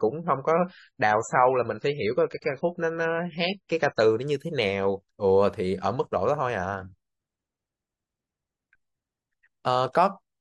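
From 0 to 4.0 s the speech plays at a low starting bitrate in the adaptive stream. Nothing is above 7.9 kHz and codec artefacts are stronger, which fits roughly 15 kbit/s MP3. It then steps up abruptly, with no gap, to a version consistent with 128 kbit/s.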